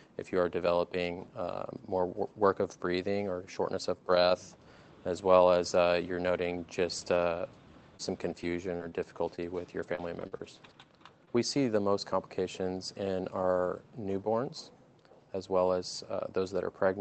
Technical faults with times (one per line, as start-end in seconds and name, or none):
7.01-7.03 lost packet rebuilt from error correction
7.97-11.29 scattered short gaps
13.25 dropped buffer (overrun)